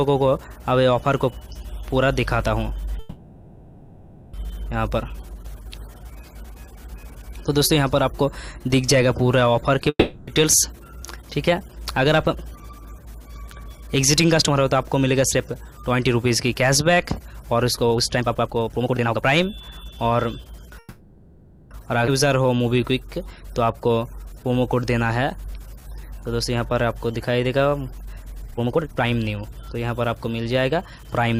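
At 2.99 s the audio stalls in a call audio freeze lasting until 4.35 s. The last sound is stretched into a fading buzz for about 1.34 s. Then playback resumes where it stopped. Nothing is lost. The stall likely comes from packets held up in transit, which let the jitter buffer run dry. The gap simply pushes everything after it 1.34 s later.

From 9.89 s to 10.29 s there is a long network dropout. The receiver fills the hole with a decaying continuation of the last sound. About the final 50 ms is near silence. When audio returns, 0.38 s of material is gone for good. Playback jumps forward, because the lost stretch never plays. A run of missing packets is the likely cause.

A jitter buffer speed-up follows from 11.02 s to 15.44 s. It is mild, running at 104% speed. Roughly a fifth of a second is trimmed away in many tiny cuts of pitch-period length. Pitch stays put. The buffer was holding more than its target and was draining the excess.

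A much stronger speed-up runs from 17.77 s to 20.73 s. Here playback reaches 134%. Around a second is removed, and the sound is noticeably rushed. Straight after it, a second call audio freeze holds from 20.79 s to 21.73 s. It fills about 0.92 s with the same fading tail, and again nothing is lost.

At 22.07 s the audio does a skip ahead. About 0.7 s is dropped. The two sides are butted together almost seamlessly, with only a 10 ms bridge. Later audio was already queued, so playback leapt forward and gave back that delay.

From 22.28 s to 28.42 s the jitter buffer slow-down sets in. It plays at 94% speed. Pitch periods and bits of pauses are repeated to add 395 ms of reserve. Sounds feel drawn out.

Finally, a speed-up from 28.48 s to 31.35 s runs at 121%. It removes about 0.7 s and audibly hurries the closing stretch.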